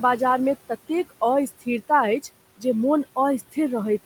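From the start, noise suppressor artifacts are heard. Background noise drops about 17 dB between phrases, then returns under speech, over room noise.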